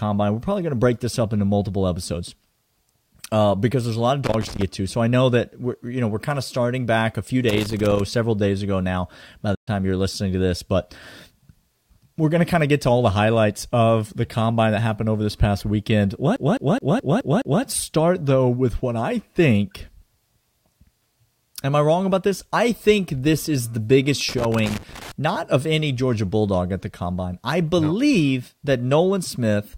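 A worn or dirty contact making and breaking causes loose connector crackle, chopping the speech into irregular scratchy bursts from 4.24 to 4.62 s after "there's a lot of", and from 7.49 to 8.00 s. From 9.55 to 9.68 s, likely a Bluetooth dropout, the audio cuts out for about 120 ms and resumes as if it had kept playing, just before "you're listening to this". From 16.36 to 17.63 s, a CD stuck on one turn keeps jumping back, replaying the same 0.21 s of speech six times as a fast, even stutter. The loose connector crackle returns from 24.29 to 25.12 s, between "is the biggest" and "not of any".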